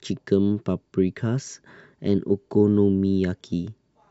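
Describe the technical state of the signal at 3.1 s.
At 3.1 s the signal is intact, with no audible dropout, distortion, or other technical fault at that moment.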